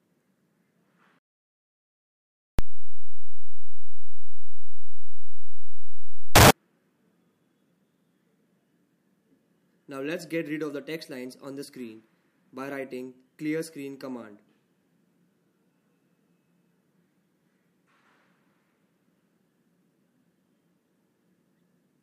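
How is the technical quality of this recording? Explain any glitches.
There's one clear glitch: a wrong sample width from 2.59 to 6.51 s. It sounds like 16-bit data read as unsigned 8-bit, so you get loud noise hiding the original playing at half speed, an octave low.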